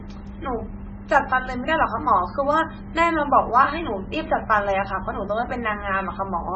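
From start to end, the speech carries heavy MP3 compression artefacts. Nothing is heard above 8 kHz. Weak frequency lines flicker in and out frame to frame, giving a watery, swirly texture. The damage fits a very low bitrate near 16 kbps, the likely cause.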